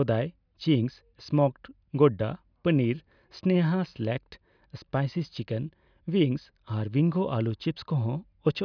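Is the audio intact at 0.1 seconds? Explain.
Yes, the speech at 0.1 seconds plays through intact, with no dropout, click or distortion at that moment.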